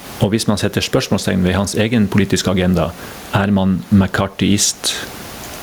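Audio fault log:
Throughout: gain pumping. The gain swings by around 15 dB, while loud and quiet syllables sit squashed close together in level. That pattern likely comes from input gain set far too high with a fast limiter or compressor hauling it down. Unlike a noise gate, nothing cuts to silence. The room noise, about 35 dB below the speech, is not switched off.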